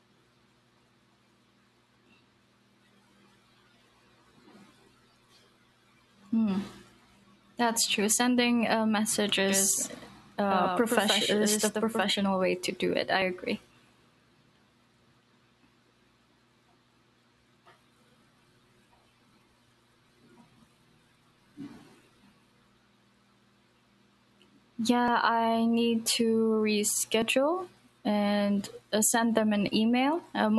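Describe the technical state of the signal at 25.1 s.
At 25.08 s there is a small jump in the speech, just before "I need". There is no gap or silence. The sound simply skips forward. This is likely a dropped buffer (overrun). The hardware would have overwritten a block of samples before the program read them. The two sides of the missing piece are then joined directly. The lost stretch is very short, around 20 ms, so the jump is brief.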